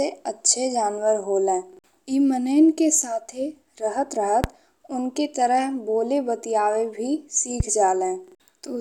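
Loud pops at 4.44 to 4.46 s and 7.60 to 7.63 s break into this speech recording, each a single sharp click lasting about 25 ms, the first roughly 20 dB above the speech and the second somewhat weaker. The speech runs on beneath both. A brief electrical step or spike, likely from static, a switch or a driver glitch, was added to the signal and shaped by the following circuitry into these short, hard transients.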